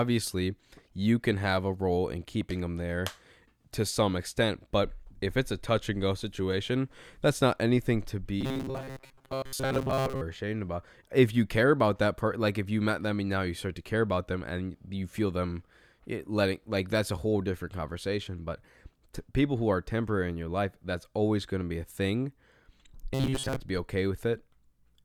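Speech clip with robotic sound from repeated short buffers at 8.41 to 10.21 s and 23.14 to 23.61 s. The voice turns into a rigid metallic buzz at 133 Hz. Audio likely arrived too seldom. A 7.5 ms slice kept repeating, replacing most real sound.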